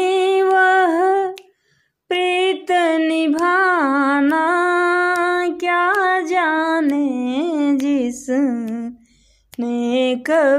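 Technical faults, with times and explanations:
No technical faults are audible anywhere in the clip.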